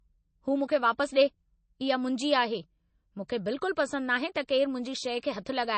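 A speech recording that sounds watery and dull throughout, with nothing above 8.3 kHz, the plainly audible damage of MP3 compression, likely at a low bitrate around 32 kbps. Brief pre-echo hiss smears attacks at 4.34 s and from 5.20 to 5.23 s, where the codec spread quantisation noise ahead of sharp onsets.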